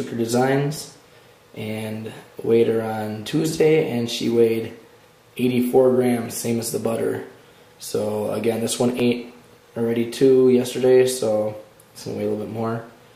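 There's a regular click recurring every 2.75 s, about five in all from 0.77 s to 11.74 s. That steady spacing is the signature of clock drift buffer slips: two devices likely running on separate clocks roughly 500 ppm apart, so the buffer dropped or repeated around 70 samples at each slip.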